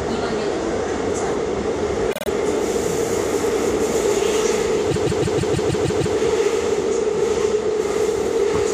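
Repeated frames at 2.10 to 2.28 s and 4.90 to 6.15 s: the same compressed blocks play again, a 52.2 ms stutter three more times, then a 156.7 ms block eight more times, stretching the sound.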